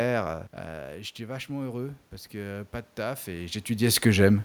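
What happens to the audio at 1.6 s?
At 1.6 s the sound is in the middle of an automatic gain rise. It runs from 0.67 s to 4.4 s. Shortly before, around half a second in, the talker moves away and the level at the microphone falls by about 12 dB. The gain control hears a quieter input and slowly raises its gain by about 8 dB. The voice and the room noise swell together as it catches up.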